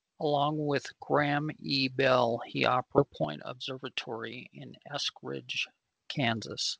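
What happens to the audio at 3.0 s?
Around 2.98 to 3.00 s there's a skip ahead: roughly 0.7 s of speech gets dropped, so playback jumps forward with no gap.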